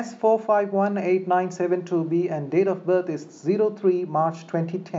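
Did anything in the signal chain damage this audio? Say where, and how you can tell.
No, nothing in the signal chain audibly damaged this speech recording; every stage from capture to playback passes it intact.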